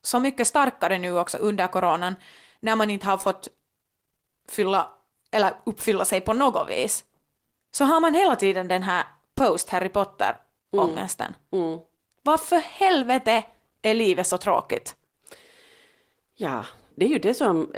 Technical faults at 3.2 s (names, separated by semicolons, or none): short concealed packet loss